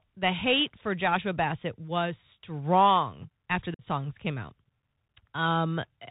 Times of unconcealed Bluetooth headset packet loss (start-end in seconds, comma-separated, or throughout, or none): 3.74-3.84